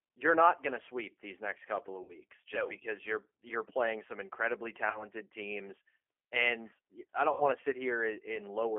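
Speech runs through a G.729 codec for the whole clip, with the sound boxed into a phone band of roughly 300 Hz to 3.4 kHz, which fits an 8 kbit/s G.729A stream. The damage is plainly audible. The voice sounds rough and takes on a synthetic edge. There are also three dropouts from VoIP packet loss concealed by the speech codec. The first runs 2.03 to 2.15 s, after "these next couple of". The second runs 4.90 to 5.09 s, after "you're playing some incredibly". The third runs 7.32 to 7.44 s, after "teams and I". The gaps last about 60, 40 and 80 ms, which fits three, two and four lost 20 ms packets. The decoder extrapolates from the last pitch and filter with fading gain, and the voice stays weak briefly after each gap.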